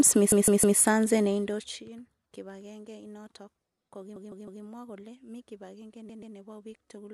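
Repeated frames stutter the speech from 0.32 to 0.79 s and from 4.16 to 4.63 s, each replaying a 157 ms block three extra times. From 6.09 to 6.35 s, a 131 ms block replays twice. Unlike a dropout, nothing goes missing: each block is whole and lengthens the audio.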